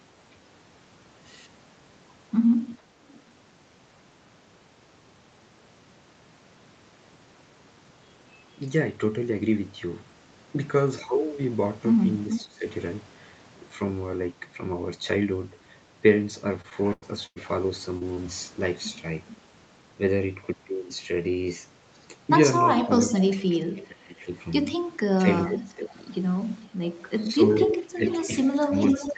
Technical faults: echo leak; speech suppressed in double talk; repeated packet loss (robotic sound); short concealed packet loss

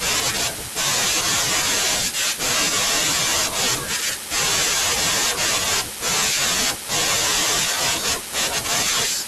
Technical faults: word clock ticks

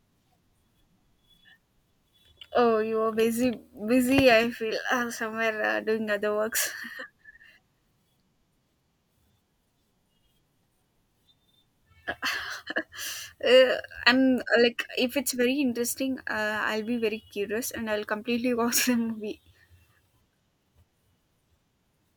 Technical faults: none

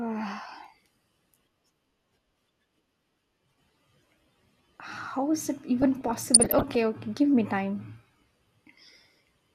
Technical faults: DAB burbling

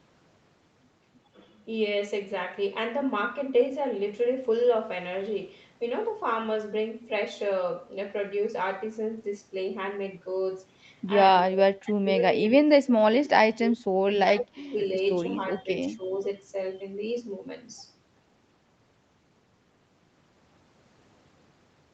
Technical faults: speech suppressed in double talk; echo leak

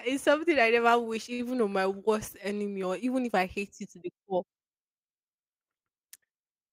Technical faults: short stall from a late packet

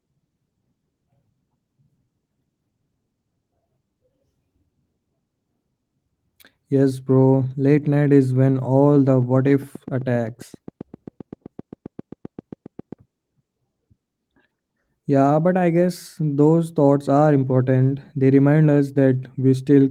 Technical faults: train of clicks

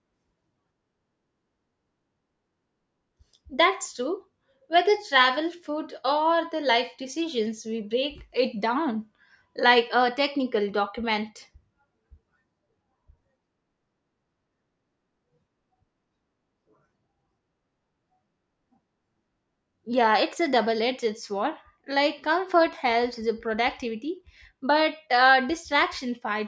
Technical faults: none

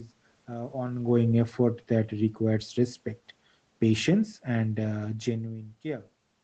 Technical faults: automatic gain falling

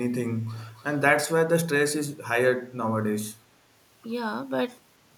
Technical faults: echo leak

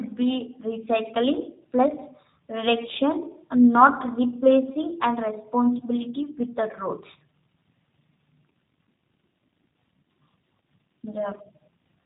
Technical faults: G.729 codec

